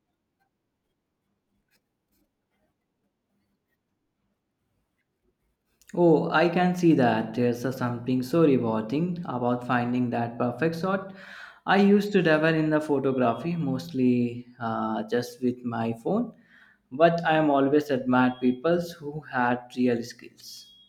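No technical faults occur in the speech, so there is nothing to describe in time order.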